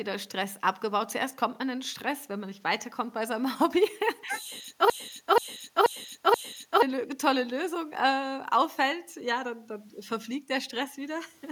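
From 4.90 to 6.82 s the speech falls into a broken-record loop: a 0.48 s fragment repeats four times, likely a stalled stream replaying its last buffer.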